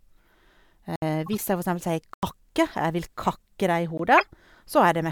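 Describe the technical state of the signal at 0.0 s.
At 0.0 s the speech signal is intact, with no technical fault present at that point.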